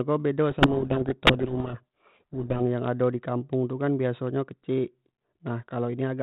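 A codec payload misread, with the two ends disagreeing on the bit order of G.726 code words, buries this 32 kbit/s G.726 speech in harsh distortion from 0.5 to 2.61 s.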